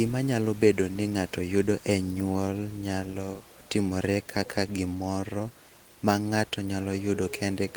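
No technical faults can be heard.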